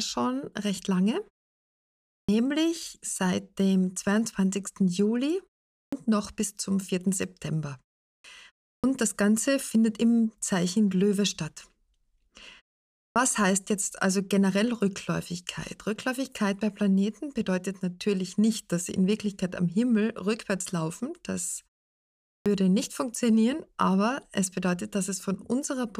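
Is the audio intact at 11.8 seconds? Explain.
Yes, the audio at 11.8 seconds is intact, with no fault at that moment.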